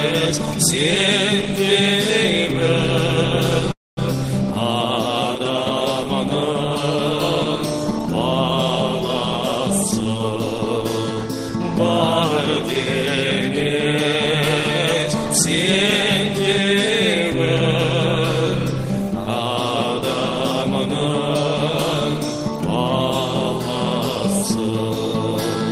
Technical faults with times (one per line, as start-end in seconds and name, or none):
3.71-3.99 call audio freeze
24.60-24.90 jitter buffer speed-up